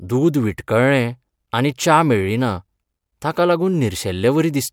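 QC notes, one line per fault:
No faults found in this speech clip. Nothing here calls for a QC flag.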